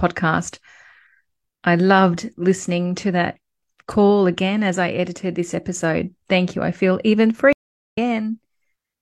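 At 7.53 s there's a stream reconnect: the connection drops, leaving about 0.4 s of silence, then the speech picks up around half a second further on by 7.98 s.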